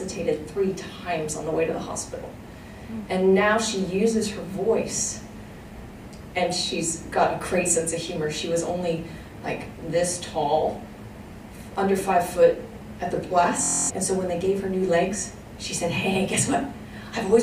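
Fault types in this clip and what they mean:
Bluetooth stutter: late or lost wireless packets made the receiver replay its last short slice. At 13.63 to 13.91 s this is a rapid machine-gun buzz rather than a silent gap, and the sound then resumes a quarter-second further on, which fits about eleven lost packets.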